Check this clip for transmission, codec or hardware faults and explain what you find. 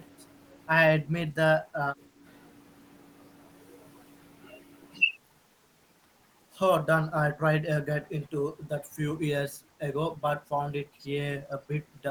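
The speech drops sharply in level six times, at 1.04–1.36 s, 1.59–1.78 s, 1.94–2.25 s, 8.04–8.28 s, 10.86–11.06 s and 11.42–11.67 s. Each dip lasts a fraction of a second and pulls the talker down by somewhere around 10 to 20 dB. This is likely speech suppressed in double talk: with both ends talking at once, the echo canceller mistook the near-end speech for loudspeaker echo and attenuated it.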